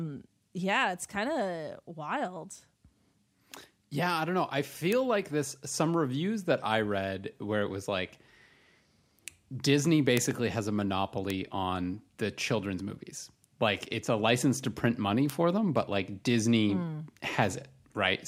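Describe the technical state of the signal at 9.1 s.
At 9.1 s the speech signal is intact, with no audible fault at that point.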